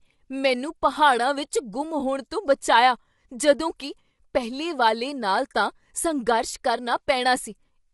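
The speech carries plainly audible coding damage throughout, with nothing above 11.6 kHz, likely low-delay AAC compression whose short frames struggle at something like 32 kbps.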